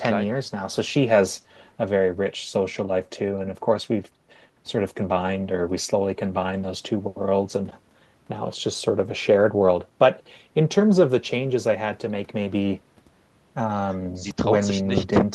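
No technical faults can be heard anywhere in the recording.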